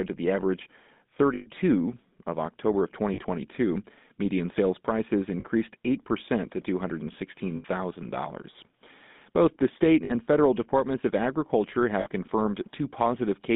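From start to finish the speech has a buzzy, gravelly roughness and a thin, band-limited tone running from about 150 Hz to 3.6 kHz. This is the GSM full-rate codec, which fits 13 kbps coding. It rebuilds the voice from a vocal-tract model driven by sparse, regularly spaced pulses, so the plainly audible damage stays constant throughout.

Six times the sound briefly freezes into a rough, metallic ring: at 1.34 s for 120 ms, at 3.14 s for 40 ms, at 5.4 s just after "sales prices" for 40 ms, at 7.56 s for 80 ms, at 10.04 s between "the state" and "federal departments of agriculture" for 60 ms, and at 12.0 s just after "federal departments of agriculture" for 60 ms. These are lost GSM frames. The decoder repeats the last good frame, and the lengths fit runs of two to six 20 ms frames.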